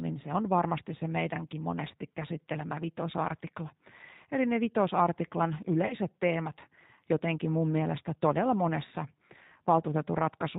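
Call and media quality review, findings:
G.729 codec damage throughout: everything above 4 kHz gone, speech rough and a bit synthetic, consistent with an 8 kbit/s CELP model rebuilding each frame from a pitch and filter guess.

VoIP packet loss concealed by the speech codec, 5.87–5.95 s: about 30 ms missing, fits a single dropped packet. The decoder stretches its last frame and fades it out, then recovers weakly.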